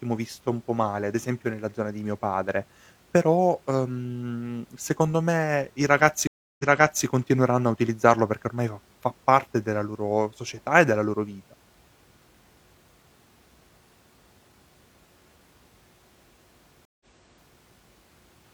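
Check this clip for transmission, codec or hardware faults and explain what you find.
Two stream reconnects break up this speech. The first runs from 6.27 to 7.05 s, right after "secondo me i ragazzi": about 316 ms of silence, then playback picks up 0.46 s earlier, so you hear a short stretch again before "continueranno a utilizzarlo perché". The second, from 16.85 to 17.61 s, has 151 ms of silence and jumps back 0.6 s. Each time the connection dropped, the player restarted its decoder mid-stream, and the server resent a burst of recent audio, causing the repeat.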